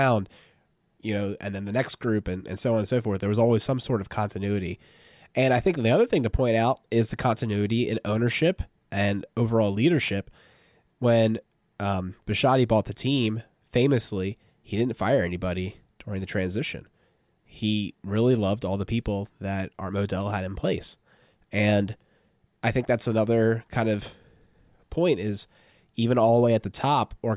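No technical faults are audible.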